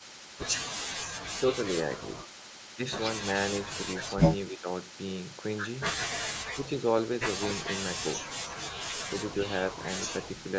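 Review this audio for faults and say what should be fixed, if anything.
From 0.0 to 0.4 s a faint delayed copy of the speech trails it by 274 ms, roughly 25 dB below the direct sound. This is an echo leak, likely from a loudspeaker on the other side whose echo canceller let some of its microphone pickup return down the line. To prevent it, tune the canceller's delay estimate and tail length for that device, or have that side use a headset.

From 4.49 to 4.67 s the speech briefly sinks by around 10 dB for roughly 200 ms, so it audibly dips in level. This is speech suppressed in double talk: both sides spoke at once, and the echo canceller likely could not tell this talker from loudspeaker echo, so it turned both down. To prevent it, use a canceller with better double-talk detection, or reduce loudspeaker echo at the source so less suppression is needed.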